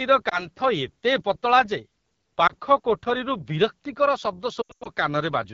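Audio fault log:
Throughout: AMR wideband (HD Voice) codec. The speech has a rough, raspy grain and a thin, hissy top, which fits one of the lowest AMR-WB rates, around 8.85 kbit/s. Content up to 6.4 kHz rests on a coarse pulse-excited vocal tract model, and 6.4 to 7 kHz is synthetic shaped noise.
0.29 to 0.46 s, 2.47 to 2.53 s and 4.61 to 4.89 s: lost AMR speech frames. The first two are single 20 ms losses, each a brief dip or warble as the decoder repeats the last good pitch and filter settings at reduced gain. The third scatters about 200 ms of loss over roughly 240 ms, with one 100 ms run where the sound drops quickly to near silence, and then returns weak or rough.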